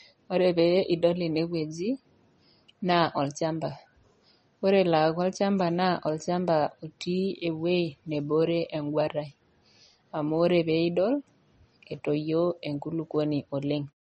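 Throughout the speech, the likely cause is MP3 compression starved of bits, around 33 kbps by the sound of it. The encoder cuts everything above 8.4 kHz and drops weak detail frame by frame, leaving plainly audible watery swirl, dull treble and smeared consonants, right into the closing fade-out near 13.94 s.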